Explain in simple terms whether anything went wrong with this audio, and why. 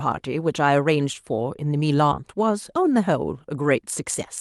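Two things went wrong in this speech recording, both typical of audio sent over a live call connection.

The first is a skip ahead, at about 2.11 to 2.13 s. Roughly seven tenths of a second of speech is simply missing, and playback jumps straight to later speech with no silence in between. That's what sets it apart from a dropout, which would leave a hole or a fill sound. Here the two sides are butted together almost seamlessly.

The second is a jitter buffer speed-up, from about 2.39 to 3.79 s. The receiving side had built up more waiting audio than it wanted, so it trimmed out many tiny slices, a bit under a tenth of a second in total. The speech runs about 4% faster, but the pitch stays the same, unlike a tape or playback-speed error that would also raise the voice's pitch.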